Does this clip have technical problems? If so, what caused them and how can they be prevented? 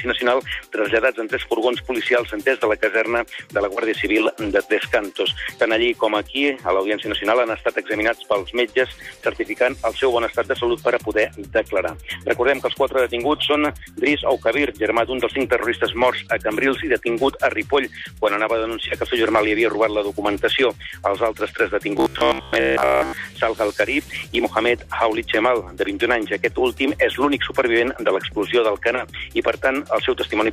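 Yes. From 21.97 to 23.17 s, robotic sound from repeated short buffers turns the audio into a rigid 66.7 Hz buzz. A 15 ms block likely replays through most of this span instead of new audio, so the waveform shows identical repeating cycles and the spectrogram shows evenly spaced horizontal harmonic stripes. A larger jitter buffer and steadier audio delivery would prevent it.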